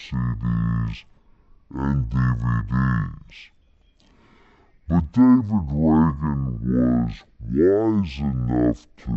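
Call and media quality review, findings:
Stereo read as mono, throughout. Speech plays at half speed, 0.5x, one octave low. Fainter mirrored copy in upper spectrum. Probable component: decoder or file reader. Interleaved left/right samples consumed sequentially as one channel. Fix channel count in header or reader config.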